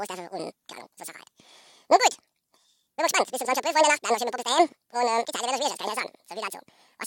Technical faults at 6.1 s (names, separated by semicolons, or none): audio read two samples at a time (double speed)